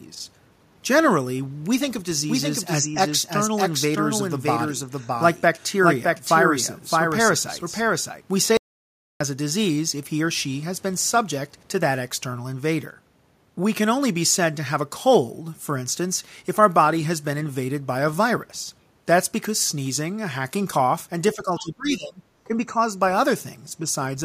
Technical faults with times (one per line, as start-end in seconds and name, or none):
2.30-8.22 doubled audio track
8.57-9.20 audio dropout to silence
21.34-22.79 speech suppressed in double talk
21.58-21.63 other side's voice leaking through